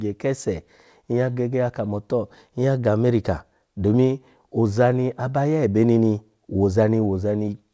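No technical faults are audible.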